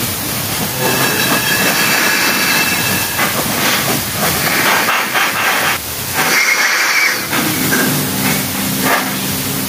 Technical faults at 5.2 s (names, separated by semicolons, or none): gain pumping; doubled audio track